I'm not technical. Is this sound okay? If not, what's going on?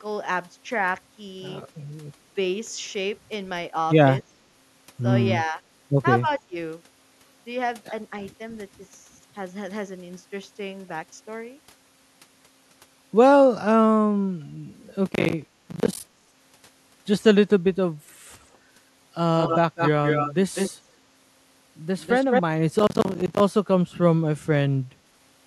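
No. Three kinds of fault can be heard.

Speech suppressed in double talk: when both ends of the call spoke at once, the echo canceller, the part meant to stop the other side hearing themselves, most likely couldn't tell this talker's voice from the loudspeaker sound and turned the voice down. You can hear the voice briefly dip or thin out at 5.44 to 5.61 s, more strongly at 6.21 to 6.57 s, and for a split second at 15.66 to 15.70 s.

Processor overload crackle: the computer handling the audio fell behind and kept missing its deadlines for the small chunks of sound it processes, each only about a hundredth of a second long. Every missed chunk became a tiny gap of silence. Dozens of these gaps in a row are heard as a gritty crackling over the voice from 15.06 to 16.4 s, and again from 22.79 to 23.4 s.

Echo leak: the other side was likely using a loudspeaker, and their echo canceller didn't remove everything their microphone picked up, so this voice came back to the call. 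You hear a second copy of it trailing about a fifth of a second behind, from 19.39 to 20.34 s and 20.54 to 20.72 s, slightly quieter than the voice. From 22.0 to 22.42 s the echo is about as loud as the voice itself.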